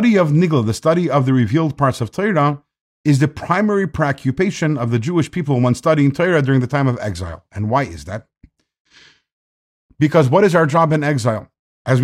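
Speech recording with no audible technical faults.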